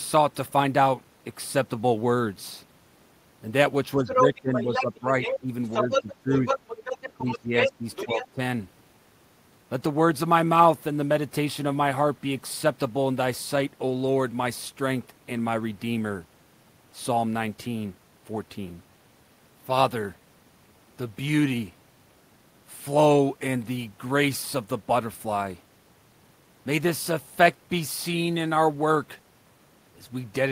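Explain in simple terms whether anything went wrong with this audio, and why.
Something did go wrong, in the first half of the clip. It looks like both people talked at once, and the device's echo canceller, which is meant to strip the loudspeaker's sound out of the microphone, likely struggled to sort one voice from the other. What it does to the sound is speech suppressed in double talk: the talker's voice is turned down in three patches, from 3.96 to 5.51 s, 5.82 to 6.47 s and 7.14 to 8.39 s. It sinks noticeably and in places nearly drops out, deepest in the short middle patch.

Over the same stretch there is the other side's voice leaking through, from 4.07 to 8.28 s. The far end was playing on the talker's loudspeaker, and the echo canceller likely failed to remove it from the microphone. That second voice comes through at roughly the same loudness as the talker, so the two are heard on top of each other for about four seconds.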